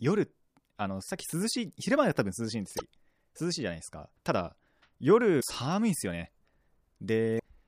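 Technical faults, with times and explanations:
2.76–2.82 s, 5.37–5.43 s and 7.36–7.41 s: damaged data in a compressed stream. Corrupted frames are misdecoded while the decoder regains sync, giving brief glitches.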